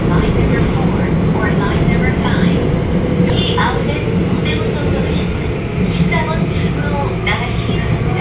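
A skip ahead at 3.3 s: roughly 0.7 s of sound is dropped while later audio waits, so playback jumps forward with no gap, over a call path cut off above 4 kHz.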